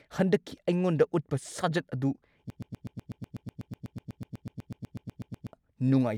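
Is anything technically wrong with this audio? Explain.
Yes, there's a broken-record loop in this speech clip. From 2.5 s to 5.53 s, a tiny fragment of about 124 ms plays over and over, back to back, 25 times, giving a rapid stutter instead of continuous speech. The likely cause is the player, encoder or stream stalling and repeatedly resending the last chunk it held, so the audio that belonged in those three seconds never comes through.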